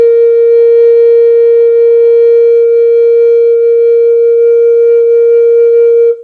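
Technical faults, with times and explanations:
Nothing stood out on listening to this music clip.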